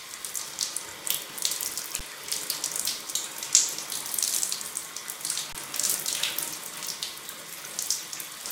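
A recording of everyday sound with two underruns with held sample. At 2.00 s the output buffer ran dry and the converter held its last value, so the waveform goes flat for 10.7 ms, which fits a 512-sample buffer. The same happens from 5.53 to 5.55 s for 21.3 ms, consistent with 1024 samples. In each case playback resumes past the gap rather than where it stopped, skipping roughly 10 ms and 20 ms of audio respectively.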